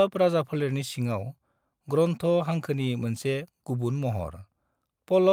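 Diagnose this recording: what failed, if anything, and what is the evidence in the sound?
No fault is audible here.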